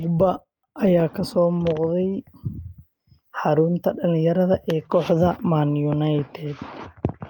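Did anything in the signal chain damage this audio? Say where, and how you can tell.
No, nothing in the signal chain damaged this audio, and there is no point in it where any harm can be heard.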